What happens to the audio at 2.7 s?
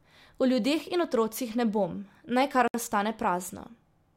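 The speech drops out from 2.68 to 2.74 s, a gap of about 66 ms. This is a gap at a join of encoded pieces. Two separately encoded segments were butted together untrimmed. Their start delay and end padding remain. The edges are smeared by the codec.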